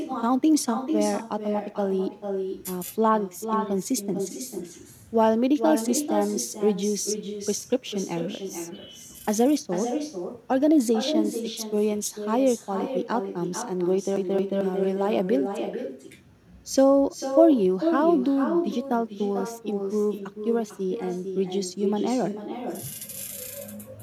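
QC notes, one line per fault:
throughout, echo with no canceller: every phrase is followed about 0.4 s later by a thinner copy, about 7 dB quieter. The far end's loudspeaker feeds its microphone and nothing subtracts it, so the speech returns after the network round trip.
14.16 to 14.61 s, CD stuck on one turn: a fast, even stutter where a 222 ms slice of speech plays twice over, with a brief mute at each jump. A scratch knocks the laser back one track at the same point on each revolution.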